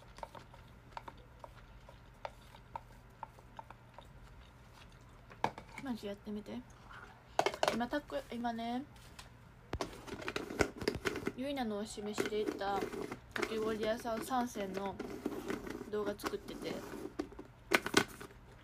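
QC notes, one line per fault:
7.40 to 10.41 s, periodic USB or driver dropouts: a run of ticks every half second, around seven in all. Something is stalling the audio path on a fixed cycle, and each stall skips a sliver of signal, well under a millisecond, so you hear clicks rather than gaps.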